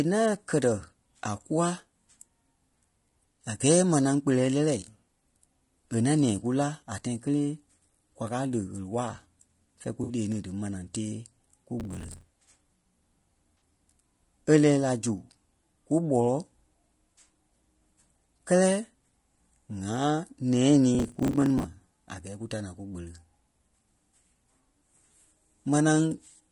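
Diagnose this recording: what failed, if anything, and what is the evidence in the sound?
Codec stage: speech throughout is rough and grainy, with noise filling between harmonics; a spectrogram shows smeared harmonics and a thin top band, likely low-delay AAC compression around 32 kbps.

Network and decoder: AAC frame loss with concealment at 10.03–10.13 s, between "fɛ̂ɛ kú" and "lee ni dí", and at 13.59 s. Missing frames were rebuilt from the previous spectrum, seen as a blurred, noisy vertical patch.

Driver or buffer stage: processor overload crackle at 11.80–12.33 s and 20.95–21.64 s, before "a gɛɛ kú ta". Dozens of roughly 10 ms buffers missed deadlines and replayed old audio, shown as hard-edged waveform discontinuities.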